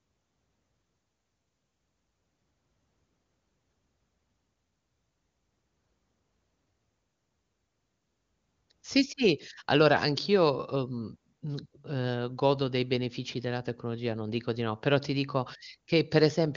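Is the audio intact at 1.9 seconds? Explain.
Yes, the speech at 1.9 seconds is intact, with no fault at that moment.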